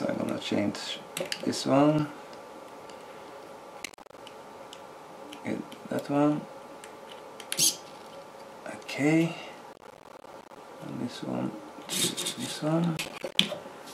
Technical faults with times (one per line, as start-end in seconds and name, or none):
3.83-4.18 processor overload crackle
9.73-10.57 processor overload crackle
12.97-13.43 processor overload crackle